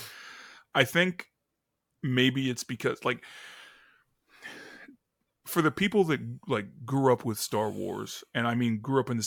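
No technical faults detected.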